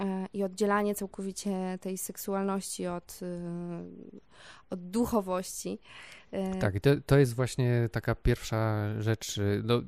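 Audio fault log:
No faults turned up anywhere in this one, so there's nothing to log for it.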